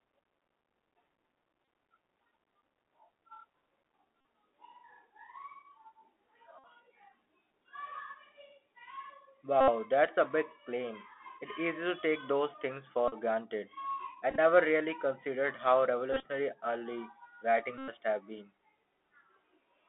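Throughout, the speech passes through the Bluetooth CVSD headset codec. The line is confined to about 250 Hz to 3.4 kHz, and the one-bit, 64 kbps delta modulation leaves a granular hiss and scratchy sibilants, unlike the swirly smearing of a low-bitrate transform codec.

Bluetooth headset packet repeats occur at 1.65, 4.21, 6.59, 9.61 (just before "that's a big claim"), 13.08, 14.30 (after "granted I"), 16.13 (before "early writing") and 17.78 s, lasting 30 to 101 ms. Each time, the last packet is replayed, giving a steady buzz near 267 Hz rather than the silence of a dropout. The losses at 14.30 and 16.13 s are scattered in short runs of about 20 ms.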